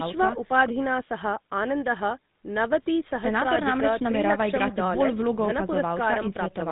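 From start to finish the speech carries GSM full-rate codec damage, plainly audible: nothing above 3.8 kHz survives, and pulse-driven vocal-tract coding adds a buzzy, gravelly roughness, consistent with a 13 kbps link.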